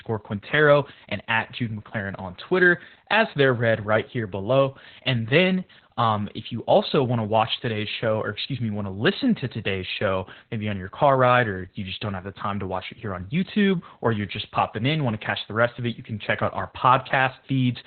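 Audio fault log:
Throughout: Opus voice compression, heavy. The speech has nothing above about 4.3 kHz, so sibilants and consonant edges are gone and the voice sounds muffled and boxy, which fits a narrowband SILK mode at around 8 kbps. At that rate the linear-prediction coder models the excitation only coarsely, leaving a hoarse, slightly robotic buzz on voiced sounds, with the coding working in 20 ms frames.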